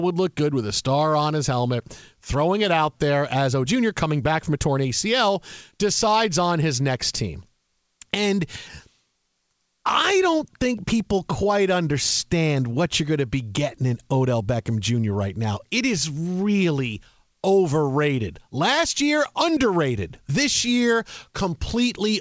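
Speech, carried over a wideband call path whose codec leaves nothing above 8 kHz. Right after "it out there as", at 3.66 s, the sound lurches forward with no gap: roughly 0.7 s of speech is simply gone, and the two sides are butted together almost seamlessly. This is a skip ahead. A stretch of audio was dropped while later audio was already queued, dropping the delay by about that much in one jump. Immediately afterwards, from 3.75 s to 5.79 s, leading into "decides on his next", the talker sounds rushed though the pitch stays put. That is a jitter buffer speed-up: the buffer was still holding more audio than it wanted, so it trimmed tiny pitch-period-sized slices over and over, playing at about 107% speed and shedding around 150 ms in total.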